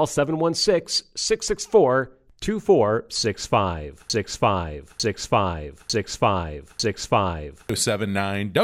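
From 4.10 s to 7.69 s the speech falls into a broken-record loop: a 0.9 s fragment repeats exactly four times back to back, likely from a stalled player or stream resending its last buffer. The spectrogram and waveform show identical blocks tiled end to end.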